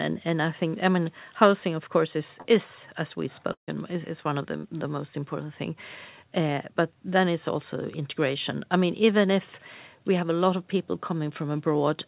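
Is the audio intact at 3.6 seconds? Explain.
No. From 3.52 to 3.69 s the sound breaks into a fading buzz, then near silence for about 0.12 s. This is likely a long network dropout. Audio stopped arriving, the receiver stretched the last sound, and roughly 0.16 s was lost outright.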